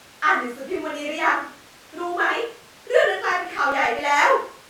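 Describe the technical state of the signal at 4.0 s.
At 4.0 s the signal is at the tail of a run of CD scratch ticks lasting from 3.04 to 3.99 s, eight in all, about eight per second. A blemish on the disc removed more data than error correction could restore on each rotation, so the player patched or muted a few milliseconds each time. These are small regular clicks in the speech. A spectrogram shows thin, evenly spaced vertical broadband lines, and the waveform shows brief flattened or stepped notches.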